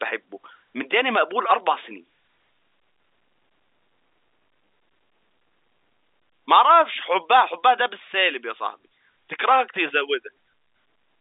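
No technical faults are audible.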